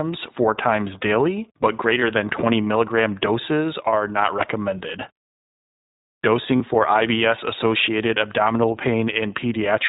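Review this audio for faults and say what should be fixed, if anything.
iLBC codec, throughout the clip: the speech is band-limited to narrowband, with nothing above 4 kHz, and carries a plainly audible rough, slightly synthetic edge. That is what happens when each short frame's excitation is coded independently at a low rate, and the sound fits iLBC's 20 ms mode at 15.2 kbps. To prevent it, record or route the call through a wideband codec such as Opus instead of iLBC.

Lost iLBC frames, at 2.00 to 2.03 s, just after "four times daily but", and again at 6.56 to 6.61 s: each gap is filled by a brief held, faintly buzzy vowel. The decoder is repeating the last pitch cycle mixed with noise to cover missing packets. The first gap spans about 20 ms and the second about 40 ms, consistent with one and then two dropped frames. The speech recovers immediately afterwards because iLBC frames stand alone. 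To prevent it, fix the packet loss on the network path or add forward error correction and a larger jitter buffer.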